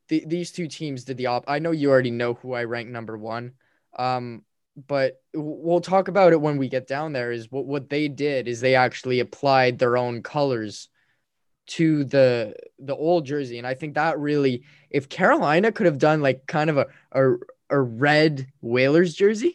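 No technical faults are audible.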